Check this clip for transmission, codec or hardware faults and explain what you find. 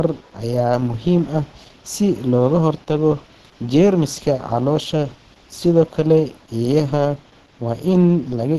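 There's one fault, and it runs through the whole clip. The speech has nothing above 12.1 kHz. It's likely low-bitrate audio saved at a high bitrate: a heavily squeezed earlier encode re-saved as a roomy MP3 that can't restore what was stripped.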